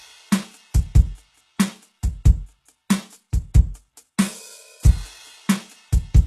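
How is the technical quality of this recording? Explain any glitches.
Quality is noticeably compromised by codec damage throughout the music. From start to finish the treble sounds bright but synthetic, and nothing reaches above 12.3 kHz. The likely cause is HE-AAC compression at a very low bitrate, around 16 kbps. The codec keeps the lower spectrum and rebuilds the top by copying lower bands upward, so harmonics misalign there. Unlike a plain low-pass, which just sounds dull, this leaves the highs gritty and metallic.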